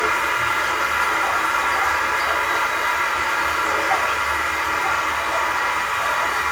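Repeated lossy encoding in an MP3 chain is the likely cause here: the audio appears to have been decoded and re-encoded around five times at a rate consistent with 128 kbit/s, each pass quantising again on a shifted frame grid. Across the whole recording this generation loss leaves a swirly, hollow, smeared texture heavier than one encode at that rate would give, transients sound blunted, and content still extends up to about 20.1 kHz.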